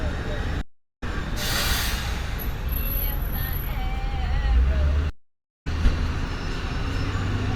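At 0.61 s the sound stops dead and stays silent for 0.36 s before picking up again around 1.03 s. This is a stream reconnect: the connection dropped, the player went quiet, reconnected and started a fresh decoder partway through the stream, so playback resumes roughly 0.4 s further on rather than where it left off. The same happens from 5.10 to 5.67 s, with 0.51 s of silence and a similar jump ahead. A waveform shows flat gaps, and a spectrogram shows clean vertical blank bands with mismatched texture either side.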